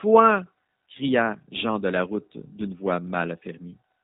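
Throughout, the speech carries G.729 codec damage: nothing above 3.8 kHz, and a rough, synthetic texture from pulse-based reconstruction, consistent with an 8 kbit/s stream.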